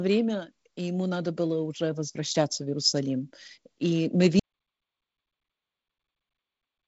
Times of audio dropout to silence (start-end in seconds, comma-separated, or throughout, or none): 4.39-6.87